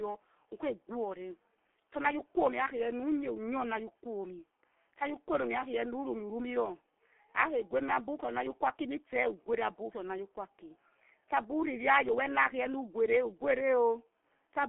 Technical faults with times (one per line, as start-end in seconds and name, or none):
0.00-14.68 G.723.1 codec